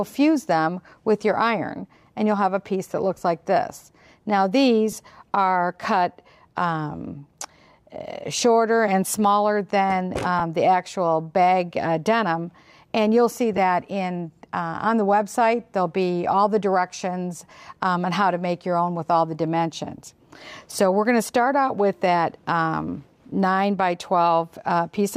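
At 4.92 s, 10.39 s and 13.57 s, single 10 ms lost LE Audio frames are concealed by reusing the previous spectrum with random signs, giving brief noisy smears rather than silent gaps, all under light lossy compression.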